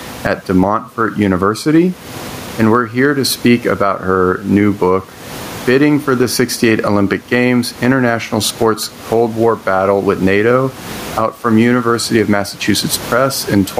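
Speech runs through the whole clip with gain pumping. The room noise sits about 29 dB below the speech. The swing is roughly 20 dB. Levels sound squashed. Excessive input gain hitting a fast limiter is the likely cause.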